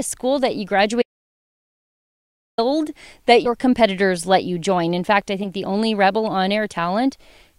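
From 1.02 s to 2.58 s the speech cuts out into an audio dropout to silence, losing about 1.56 s. The gap is silent with no room tone at all, which sets it apart from a pause. The recording simply carried on writing nothing, most likely because the input link or device dropped out. Whatever was said in that stretch is gone, and the speech resumes abruptly mid-flow.

Between 3.45 s and 3.49 s, compressed frames are skipped. The audio jumps ahead by roughly two 20 ms frames, about 40 ms of material. A shorter jump of about one frame, roughly 20 ms, follows between 5.43 s and 5.46 s. The tiny forward lurch in timing, with no silence inserted, distinguishes these skips from a dropout.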